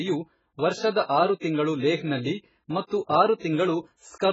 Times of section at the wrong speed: none

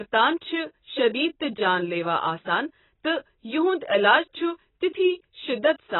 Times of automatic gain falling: none

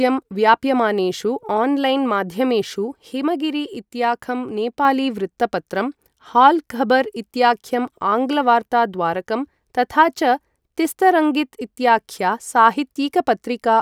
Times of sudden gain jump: 3.13-4.85

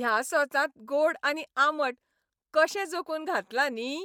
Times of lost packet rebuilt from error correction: none

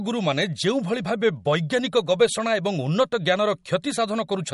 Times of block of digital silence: none

